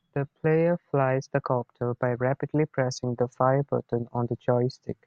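No technical faults are audible.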